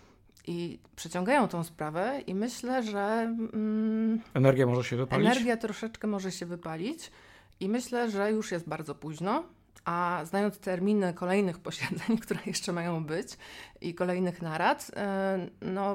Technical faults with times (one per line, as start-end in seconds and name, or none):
none